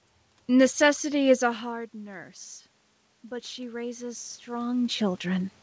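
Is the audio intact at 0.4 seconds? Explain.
Yes, the audio is intact at 0.4 seconds, with no fault at that moment.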